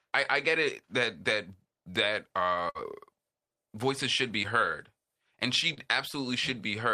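A burst of packet loss runs from 2.69 to 2.77 s, right after "it that that that". Packets arrived too late or not at all, and the receiver bridged a 54 ms gap by carrying the last sound forward and turning it down as the gap went on. That produces a held buzz if the sound was voiced, or a fading hiss if it was not. When the real audio resumes, 60 ms of the original is missing.

Short concealed packet loss follows twice. From 4.43 to 4.46 s, between "voices should be" and "heard and", 10 ms were filled in place of 20 ms of lost audio. From 5.74 to 5.79 s, after "should be heard and", 32 ms were filled for 20 ms missing. Each time the decoder extended the last sound, using its pitch if voiced or shaped noise if not, then blended back, leaving a brief smear or wobble.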